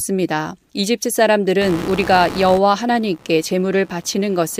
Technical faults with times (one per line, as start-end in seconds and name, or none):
1.61-4.60 computer activity noise